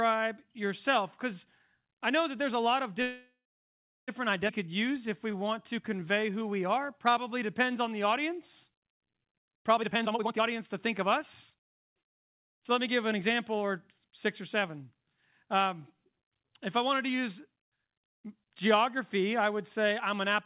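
From 3.02 to 4.10 s there is a call audio freeze. The last sound is drawn out into a fading buzz or hiss that falls silent for about 0.71 s. Playback then resumes exactly where it stopped, with nothing lost. The likely cause is packets held up in transit, which emptied the jitter buffer. Nothing in this audio sits above 4 kHz, which fits a G.711 mu-law call path.

At 4.48 to 4.51 s comes a skip ahead. Roughly 0.7 s of audio is dropped, and the two sides are spliced almost directly. Unlike the freeze, this leaves only a brief 11 ms fill rather than a long inserted gap, and material is missing.

From 4.63 to 9.71 s a jitter buffer slow-down plays the audio at 91% speed. Repeated pitch periods add 440 ms and stretch sounds without lowering the pitch.

A jitter buffer speed-up follows from 9.78 to 11.04 s at 147% speed, removing roughly 0.7 s and sounding clearly hurried. A milder one runs from 11.54 to 14.78 s at 106%, trimming about 0.2 s. 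In both, the pitch stays the same, which separates them from a simple faster playback.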